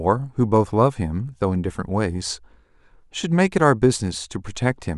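No technical faults can be heard anywhere in this speech recording. There are no events to place in time and nothing in the signal chain to trace back to a cause.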